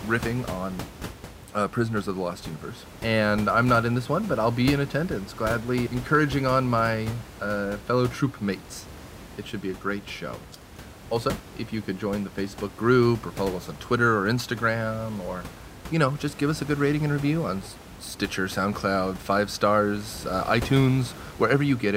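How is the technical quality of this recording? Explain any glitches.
No glitches; technically sound recording.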